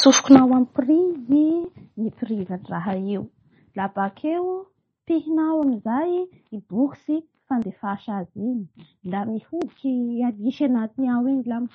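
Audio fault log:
throughout: MP3 compression. The encoder was likely starved of bits, which fits a rate near 32 kbps, so it discarded everything above 8.2 kHz and dropped weak frequency lines from frame to frame, leaving the speech dull and watery with swirling, metallic s sounds.
1.65, 5.63, 7.62 and 9.62 s: audio missing between chunks. The recorder likely lost a few milliseconds each time it closed one 2-second block and opened the next, then joined the two sides directly, so the speech jumps forward with a brief, abrupt skip at each point.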